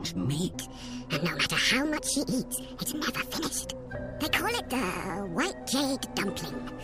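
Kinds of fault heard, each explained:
Wrong sample rate: from 0.54 s everything runs 1.5 times fast and about 7 semitones high, fitting 32 kHz audio played at 48 kHz; unlike pitch shifting, tempo rises too.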